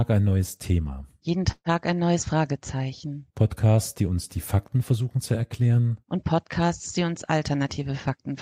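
A call audio freeze runs from 1.51 to 1.69 s, just before "ein neues". The likely cause is packets held up in transit until the jitter buffer ran dry. The receiver kept extending the last sound as a fading buzz that ended in 50 ms of silence, about 146 ms of fill in all. When the audio resumes it picks up exactly where it stopped, so nothing is lost, but a pause has been inserted and everything after it is delayed by 146 ms.

A jitter buffer speed-up follows from 7.63 to 8.31 s, right after "die uns". Too much audio had built up in the buffer, so the receiver trimmed it back by repeatedly cutting out short pitch-period-sized pieces, around 50 ms in total. The speech plays at about 107% of normal speed without any change in pitch, so this closing stretch sounds slightly hurried.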